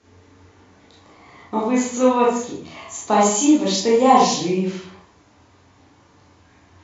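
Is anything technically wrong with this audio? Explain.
No, there's nothing technically wrong with this speech recording that I can hear, so there's nothing to flag here.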